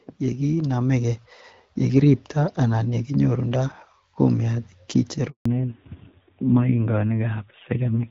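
From 0.19 to 1.28 s, the voice and the background noise swell together by about 5 dB over roughly a second. This is automatic gain rising: the gain control judged the input too quiet and raised its level gradually, lifting everything at once.

At 5.30 s the voice fades out within a few tens of milliseconds and stays silent for 160 ms, until 5.46 s. This handover gap happens when the call switches networks: no speech frames arrive during the switch, so whatever was said then is lost.

From 5.46 s to the end, the voice turns duller and rougher, with nothing left above 4 kHz. This is a fallback to narrowband. The call drops from the HD Voice wideband codec, whose light coding before the gap fits about 12.65 kbit/s, to a narrowband codec whose rougher texture points to a rate near 7.4 kbit/s.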